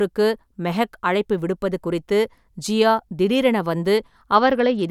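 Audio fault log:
4.35 to 4.9 s, Bluetooth SBC bit pool drop: the treble goes dull and a gritty noise creeps in right to the end of the speech, which fits the phone cutting the bit pool from around 31 to 11, roughly 83 kbps, so the top sub-bands get starved and everything else coarsely quantised.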